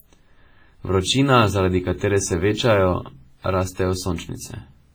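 Throughout the speech, the likely cause is heavy WMA compression at a bitrate that fits about 24 kbps. The transform coder spreads quantisation noise over tens of milliseconds and discards weak spectral detail, leaving a ringing, washy sound with hiss that breathes with the signal.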